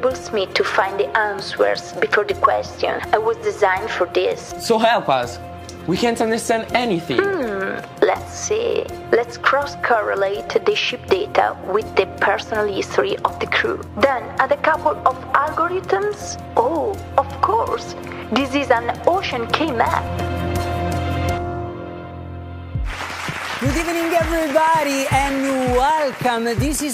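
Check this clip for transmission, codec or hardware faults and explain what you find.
One hardware-type fault: from 22.93 to 26.81 s, a train of clicks, about forty irregular pops at 9.3 per second, peaking roughly 5 dB above the sound, likely from nearby interference or a faulty connection.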